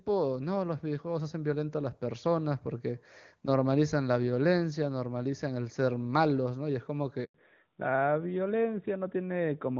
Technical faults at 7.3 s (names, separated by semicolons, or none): handover gap; fallback to narrowband